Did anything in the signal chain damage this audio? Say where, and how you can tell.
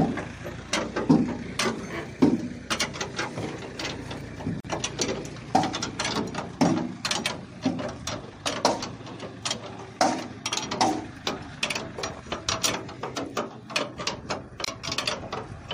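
Yes. The sound drops out abruptly twice: a 43 ms silence from 4.60 to 4.65 s and a 31 ms one from 14.65 to 14.68 s, each with blurred edges. The sound then resumes exactly where it broke off, ten seconds apart. This is a gap at a join of encoded pieces, introduced at the codec stage. Separately encoded segments were spliced without trimming the encoder's start-up delay and final-frame padding, leaving that silence embedded at every boundary.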